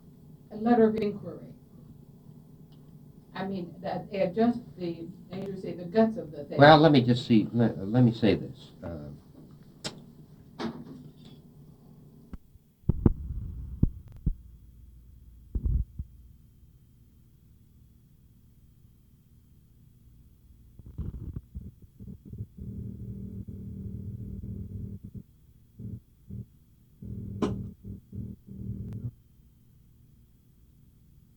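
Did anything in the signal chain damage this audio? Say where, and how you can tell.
Yes, at the driver or buffer stage: repeated buffer stutters at 0.98, 5.42, 14.08 to 14.17 and 28.89 s. Each replays a 43 ms block, fitting a 2048-sample buffer; at 14.08 s it plays twice over. The waveform shows identical copied blocks meeting at hard steps, and the spectrogram a thin vertical line at each join.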